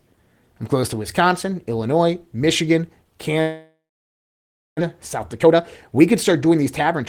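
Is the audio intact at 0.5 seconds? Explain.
Yes, the audio is intact at 0.5 seconds, with no audible fault at that moment.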